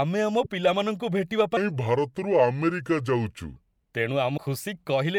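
At 0.44 to 0.46 s, damaged data in the compressed stream causes a brief glitch. The decoder hit corrupted frames, lost sync and jumped to the next valid frame header. The same fault returns at 4.34 to 4.38 s.

From 1.57 to 3.56 s, a section at the wrong speed plays at 0.76 times its original rate, so the speech becomes slow and drops about five semitones in pitch. The likely cause is that this stretch was resampled against the wrong clock.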